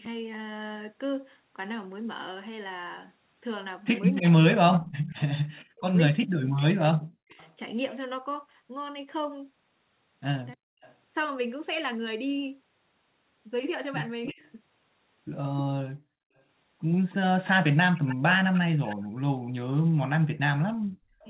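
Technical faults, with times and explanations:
4.15–7.54 s, 10.81–10.95 s and 14.26 s to the end, echo leak: a faint delayed copy of the speech trails it by 306 ms, about 20 dB down in the first and last stretches and about 30 dB down in the short middle one. This is likely a far-end loudspeaker echo the canceller failed to remove. A spectrogram shows ghost harmonics offset 306 ms behind the main speech.
4.21–7.37 s, 10.55–10.65 s and 14.32–14.41 s, speech suppressed in double talk: the talker's level dips in pieces, as deep as about 40 dB, adding up to roughly 1.5 s in the first stretch and about a tenth of a second each at 10.6 s and 14.4 s, where the dip at 14.4 s is only about 20 dB deep. This is likely the canceller turning down both sides while the echo overlapped. The waveform shows notched, chopped envelopes.
15.83–16.34 s, background gated by the echo canceller: the room sound drops away by about 40 dB for roughly half a second, then returns. 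The canceller clamped the microphone while the loudspeaker played. On a spectrogram the noise floor goes nearly blank in that gap, and the waveform flattens to near silence.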